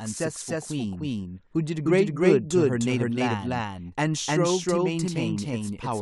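Speech runs through the whole clip with a doubled audio track: an equally loud, full-band copy trails roughly 300 ms behind, with no decay or room colour, likely from a second, slower capture path. A spectrogram shows every syllable's pattern repeated at that fixed offset.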